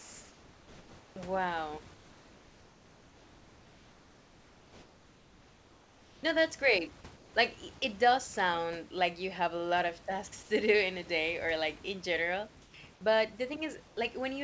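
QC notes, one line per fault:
0.00–1.16 s, 1.94–6.23 s, 7.16–7.34 s (after "that's great"), 12.62–12.74 s (after "or like in general") and 13.88–13.97 s, comfort noise in place of the background: in each pause the room's real background, about 28 to 30 dB below the loud parts, gives way to a smooth, featureless hiss about 2 to 3 dB quieter. The likely cause is discontinuous transmission, where the receiver synthesises noise while the sender is silent. Unlike a gate dropout, the pause never goes silent. Unlike a simple level dip, the texture changes and not just the loudness.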